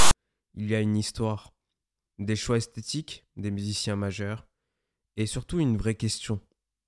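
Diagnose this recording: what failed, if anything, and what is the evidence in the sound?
The player failed to skip the file's metadata block and decoded it as samples, a storage and file-parsing fault that produces file tags played as audio. From 0.00 to 0.13 s the text bytes give a hard-edged, harsh rasp pushed off-centre, followed by a flat silence where the zero padding sits.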